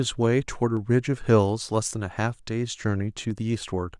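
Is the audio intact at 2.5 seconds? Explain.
Yes, at 2.5 seconds the speech plays through cleanly, with no dropout, click, distortion or other audible fault at that moment.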